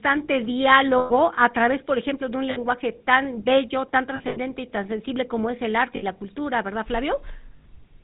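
From the start of the speech, the GSM full-rate codec is plainly audible: the voice is rebuilt from a vocal-tract model excited by sparse regular pulses at around 13 kbps, giving a buzzy, gravelly grain. On a spectrogram nothing appears above 4 kHz, and harmonics look smeared and coarse.

Lost GSM frames follow. At 0.98–1.12 s, just before "a través por ejemplo", about 120 ms is missing, which fits six 20 ms frames. The last good frame is repeated, so the sound hangs as a metallic ring. At 2.50–2.58 s, between "por ejemplo de un" and "tan bello tan", a 60 ms gap rings briefly. At 4.16–4.39 s, losses totalling 140 ms are scattered over 200 ms, the longest run around 70 ms, giving a stuttering rasp. At 5.96–6.03 s, between "sensible como es el" and "la cultura", and at 7.56–7.65 s, the gaps are 60 and 80 ms. On the spectrogram each gap shows frozen, repeated bands where formants should be moving.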